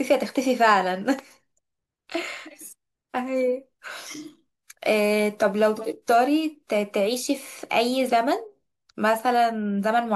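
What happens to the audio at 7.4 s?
At 7.4 s the speech continues without any dropout, click, distortion or other break.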